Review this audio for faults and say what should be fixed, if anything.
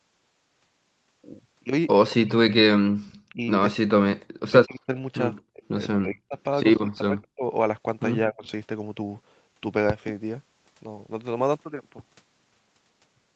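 Echo leak: the far end's echo canceller likely let part of its loudspeaker pickup through. A faint copy of the speech returns 219 ms late, about 20 dB down at 2.10 to 2.16 s and about 30 dB down at 3.06 to 3.20 s. Tune or retrain that canceller to cover this echo path.

Speech suppressed in double talk: with both sides talking, the echo canceller likely treated this talker as echo and attenuated it. The speech dips at 2.18 to 2.55 s (about 20 dB), 3.33 to 7.44 s (up to about 40 dB, in chunks totalling roughly two seconds) and 8.29 to 8.45 s (about 25 dB). Use a canceller with better double-talk detection.

Input switched to a poorer device: at 11.61 s the input likely changed to a narrowband microphone or headset call profile. From there to the end the level drops about 5 dB and a noise floor appears about 45 dB down, with no gap at the switch. Lock the input device during recording.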